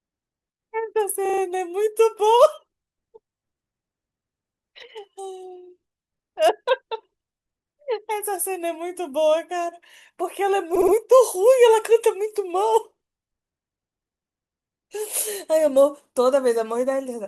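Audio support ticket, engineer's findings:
Repeated frames, two spots. At 1.25 to 1.42 s, a 40 ms chunk loops four extra times. At 10.75 to 10.94 s, a 60 ms chunk replays three more times. Stutter each time, about 160 ms and 180 ms added. Decoder fed duplicated compressed frames upstream.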